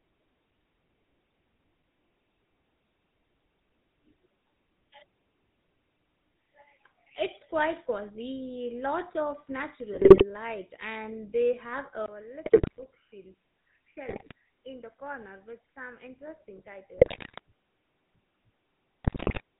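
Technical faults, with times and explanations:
Throughout: GSM full-rate codec. The speech has a buzzy, gravelly roughness because this early coder models the vocal tract as a filter and drives it with sparse, regularly spaced pulses, keeping only one excitation sample in three and discarding the rest. Nothing survives above 4 kHz, so sibilants and brightness are gone. The damage is plainly audible, and the coarseness fits a 13 kbps GSM stream.
9.94–10.24 s, 12.44–12.86 s, 14.08–14.32 s, 16.98–17.39 s, 19.04–19.41 s: GSM bit errors. In each burst the speech breaks into squawks, pops and gargling. Corrupted bits on a weak link reach the decoder, and damaged filter, pitch or gain parameters make individual frames come out with a warped spectrum or a sudden jump in level. The bursts last between about a quarter and four tenths of a second, which fits runs of a dozen to twenty damaged frames.
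12.06 s to the end: input switched to a poorer device. After a 20 ms gap, the sound turns duller and boxier, drops by roughly 10 dB, and carries a faint new noise floor far below the speech. Nothing above 3 kHz gets through from here on, narrower even than the codec's band. This is likely a change of input mid-recording to a lower-grade microphone or a headset call profile with its own tone and noise.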